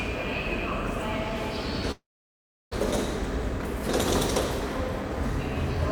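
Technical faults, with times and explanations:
1.91–2.76 s, long network dropout: the last sound smears into a fading buzz or hiss, then silence; the spectrogram shows a blurred band dying into a blank gap, likely from lost packets.
3.20–3.80 s, jitter buffer speed-up: short pitch-period pieces are trimmed repeatedly, running the audio about 7% fast at unchanged pitch; waveform cycles keep their length while whole cycles are cut out, removing around 50 ms.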